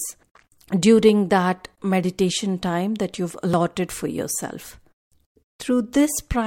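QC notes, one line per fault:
3.54 s dropped buffer (overrun): the sound jumps ahead a few milliseconds, likely unread samples overwritten; the waveform shows an abrupt step, the spectrogram a thin vertical line.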